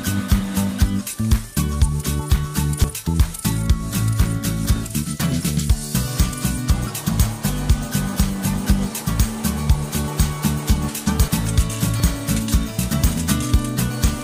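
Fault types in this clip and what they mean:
Dropped buffer (overrun): The sound jumps abruptly at 2.84, 11.28 and 12.0 seconds. Each jump comes with no gap of silence. The audio simply skips ahead, and the two sides are joined directly. About a tenth of a second seems missing at the first two points, and a few hundredths at the last. This is likely an overrun, where the hardware overwrote samples before the program collected them.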